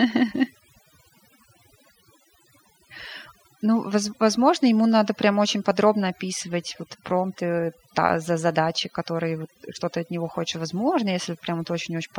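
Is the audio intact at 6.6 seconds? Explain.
No. At 6.6 seconds the speech is affected by overdone noise removal, which runs through the entire clip rather than appearing as a local event. The noise reduction was set too aggressively, so any frequency band sitting close to its noise estimate is pulled far down or gated out, and the quieter components of the voice are removed along with the noise. The background drops and breaks up into scattered twinkling artefacts.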